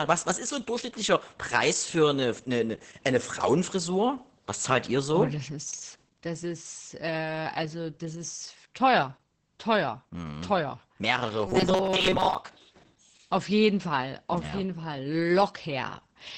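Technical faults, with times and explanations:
Throughout: Opus voice compression. SILK-style coding sounds muffled and hoarse, which points to roughly 10 kbps. The spectrogram shows a hard ceiling at 8 kHz with smeared harmonics.
11.47–12.35 s: robotic sound from repeated short buffers. A rigid metallic buzz at 188 Hz, likely from about half the audio being replaced by repeats of a roughly 5.3 ms buffer. The waveform shows identical repeating cycles.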